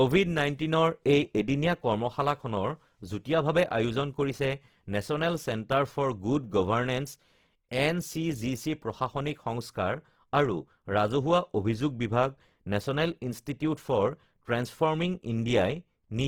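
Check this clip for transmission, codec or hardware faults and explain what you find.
Two faults are present: codec damage across the whole speech clip and one loud pop at 5.72 to 5.74 s.

Opus compression runs throughout. With so few bits, the encoder fills starved bands with folded or noise-like energy, so the speech turns grainy and rough rather than swirly; unlike MP3, content reaches 20.3 kHz with few holes, which fits a 16 kbps CELT-mode encode, likely.

A loud pop sits at 5.72 to 5.74 s, a single sharp click about 5 dB above the speech, which carries on underneath. It is a brief added voltage pulse, likely from a switch, plug or static discharge, and not a dropout, because no sound goes missing.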